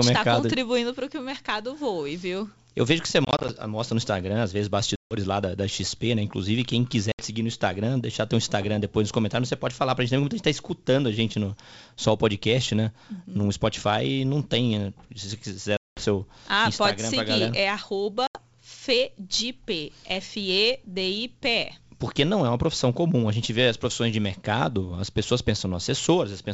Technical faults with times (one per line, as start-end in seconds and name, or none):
3.25-3.50 packet loss on an ADPCM call
4.96-5.14 packet loss on an ADPCM call
7.12-7.22 packet loss on an ADPCM call
15.77-16.05 packet loss on an ADPCM call
18.27-18.38 packet loss on an ADPCM call